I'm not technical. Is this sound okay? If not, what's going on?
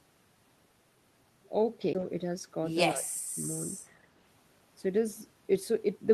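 No. At 1.93 s there's a CD skip: a tiny tick and near-silence, then the sound resumes from a different spot rather than simply dropping out and continuing. From 2.94 to 3.33 s, the speech dips sharply and partly vanishes, most likely speech suppressed in double talk: the call's echo control turned this talker down while both sides spoke, so nothing jumps, it just fades.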